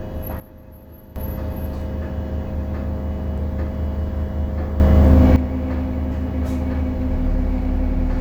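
An everyday sound recording with two sudden gain jumps. From 0.40 to 1.16 s the level drops by about 14 dB. From 4.80 to 5.36 s it rises by about 12 dB. Sound and background noise shift together. The likely cause is a digital gain step applied without a ramp.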